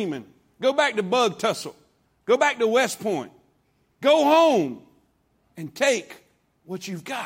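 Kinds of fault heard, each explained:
No technical faults can be heard anywhere in the speech. There is nothing here to list or explain.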